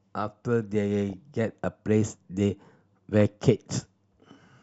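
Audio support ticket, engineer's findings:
DAB burbling, speech, at 1.10 to 1.13 s and 3.14 to 3.34 s. Short noise blips in single sub-bands. Weak DAB reception. A fraction of a percent of bits slip past error correction into MP2 data. Corrupted scale factors, where they get through, make sub-bands jump in level for up to a frame.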